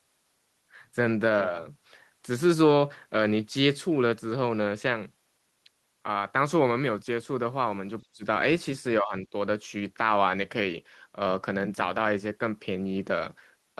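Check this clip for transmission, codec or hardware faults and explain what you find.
There's one real problem here, and it shows up twice: speech suppressed in double talk. From 8.04 to 8.24 s the speech drops sharply, by something like 35 dB, nearly gone. From 9.01 to 9.33 s there's a shallower dip of roughly 15 dB. This is likely an echo canceller that couldn't tell the near talker from loudspeaker echo while both sides spoke, so it turned everything down. Both dips sit on top of the Opus call path's normal coding texture, which cuts off around 12 kHz.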